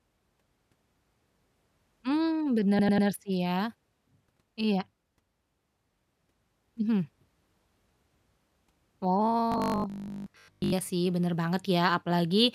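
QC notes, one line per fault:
2.79–3.07 s: repeated frames. A 96 ms block of speech plays three extra times, a stutter that adds 288 ms to the clip, which fits about four compressed frames written again. Unlike the robotic buzz, each repeat is long enough to hear as a recognisable chunk.
9.52–10.74 s: robotic sound from repeated short buffers. The speech turns into a rigid, metallic buzz at 50 Hz while still roughly following the speech, most likely because audio arrived too seldom and the last 20 ms was looped in place of most of the real audio. The fixed pitch, rather than an audible replay, sets it apart.
10.08–10.23 s: repeated frames. Inside the buzzy stretch, a 144 ms block plays once more, adding 144 ms, which points to roughly six frames resent. The doubled chunk is a single hiccup against the continuous short-loop buzz around it.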